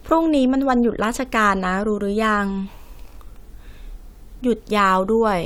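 Speech, with no audible faults.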